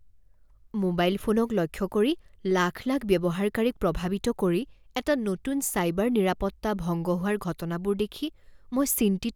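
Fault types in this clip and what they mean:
Loud pop: at 5.79 to 5.81 s, between "প্ৰভাৱিত কৰি এটা নতুন" and "নিৰাপত্তা ভংগ", a single sharp pop rises a few dB above the speech, likely from a voltage spike.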